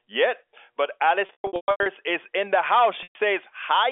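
A telephone speech recording, band-limited to roughly 300 Hz to 3.5 kHz as expected for G.711 coding, shows packet loss with pitch repetition twice. From 1.26 to 1.86 s, just before "is in the house", about 450 ms goes missing in scattered gaps, the longest near 120 ms. The receiver loops the last pitch period, giving held, buzzy fragments that fade out. At 3.03 to 3.15 s, right after "is in the house", a single 120 ms gap produces the same droning hold.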